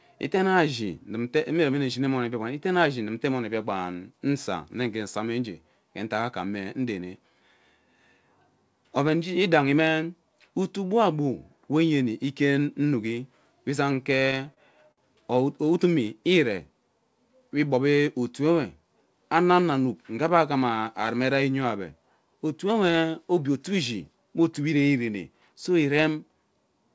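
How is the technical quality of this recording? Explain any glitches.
Two glitches stand out in this speech recording, over a call path whose band stops at 8 kHz, which fits G.722 at 64 kbps.

Repeated stalls (stutter), 13.84 to 14.99 s, just after "inuki we": packets kept arriving late, so the jitter buffer emptied ten times and the receiver stretched the last sound, up to 60 ms per gap, about 15% of the span. Nothing is lost, but the speech drags and stutters.

Jitter buffer speed-up, 24.59 to 24.82 s, just after "obie otuewe ishi me": with too much audio queued, the receiver cut short pitch-period pieces, around 40 ms in total, playing at 114% speed. The pitch is unchanged, but the speech sounds briefly hurried.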